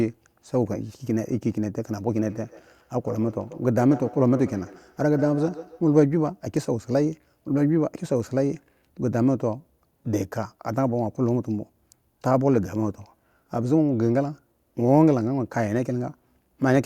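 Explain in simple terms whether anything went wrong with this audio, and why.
Something did go wrong: from 2.23 to 5.89 s there's a feedback echo between two devices. Each word comes back roughly every 150 milliseconds, thinner and more ringing. A second device in the room likely played the call aloud, and this microphone caught it again.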